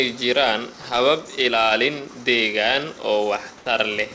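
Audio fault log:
3.58–3.66 s, comfort noise in place of the background: for about 80 ms the room hiss turns flat and featureless, about 1 dB quieter, likely because the sender paused transmission and the receiver filled the gap with synthetic noise, within a G.722 band that stops at 8 kHz.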